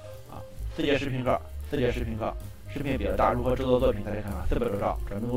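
One channel of this audio runs 40 ms behind the other, and when the two are folded down to mono the late copy lands on top of the early one as a separate event rather than blending in. The result is channel delay (doubling) across the entire clip: every onset is followed by an equal-level repeat, heard as a tight slap echo or thickened doubling, since 40 ms is too long to fuse into a single sound.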